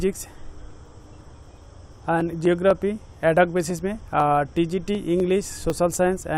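A steady train of small ticks runs through the sound from about 0.21 s to 6.2 s, recurring every 0.25 s, roughly four times a second, and audible only where there is signal. These are periodic USB or driver dropouts: something blocks the audio path at a fixed interval, and each time a sliver of audio, well under a millisecond, is skipped outright rather than filled with silence, so the waveform jumps and clicks.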